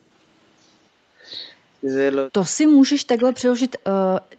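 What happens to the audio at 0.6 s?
At 0.6 s the background is gated by the echo canceller. From 0.36 to 1.24 s, while the loudspeaker is playing, the canceller turns the microphone down. The background dips by up to about 11 dB, then returns when the canceller releases.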